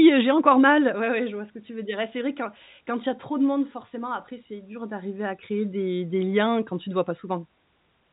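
Nothing is technically wrong with this speech clip, which has the narrow, telephone-band sound of G.711 telephone coding.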